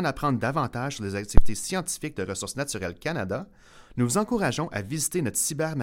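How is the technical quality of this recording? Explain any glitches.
The recording has one clear glitch, a phantom power thump from 1.38 to 1.58 s, right after "apprendre davantage sur les". A supply was switched on or off on a live input, and the sudden voltage step passed through the coupling capacitors as a deep, dull thud. It peaks at about −2 dBFS, close to overload, and dies away in about 45 ms. On a waveform it shows as a large one-sided swing that eases back to zero, and on a spectrogram as a brief burst concentrated in the lowest frequencies.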